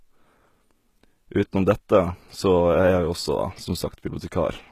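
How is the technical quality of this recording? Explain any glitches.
The recording has clearly audible codec damage across the whole speech clip, from start to finish.

Throughout, this is likely HE-AAC compression. The upper spectrum is rebuilt from copied lower bands rather than coded directly, which fits a very low bitrate of around 20 kbps. The treble stays present up to 14.9 kHz, with nothing above. Its synthetic harmonics don't line up with the lower ones, so s sounds come out gritty and metallic. A plain low-pass filter would sound dull instead.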